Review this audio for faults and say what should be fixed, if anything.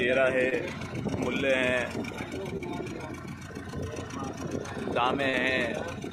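Three brief smears, each a short wobble where the sound stretches unnaturally, break up the audio at 0.49 to 0.53 s, 2.57 to 2.61 s and 5.29 to 5.35 s. The last is about twice as long as the others. This is short concealed packet loss. About 20, 20 and 40 ms of the stream arrived too late for the decoder, and the receiver covered each gap by continuing the preceding sound, then blending back into the real signal.

To prevent it, stabilise the network path and enable forward error correction or a slightly deeper jitter buffer so late or lost packets can be recovered rather than synthesised.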